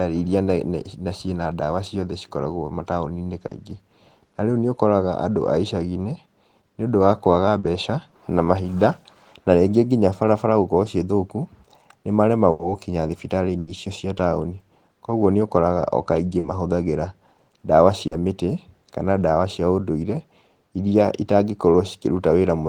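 Short concealed packet loss occurs at 3.47 and 7.59 s: 40 ms of the call arrived too late, and the receiver extended the preceding sound to fill it, leaving a brief smear or wobble. A burst of packet loss follows at 12.51 and 13.59 s, where 80 ms went missing each time, bridged by a fading held buzz or hiss before the speech jumps ahead. The same short concealed losses return at 16.39 and 18.07 s.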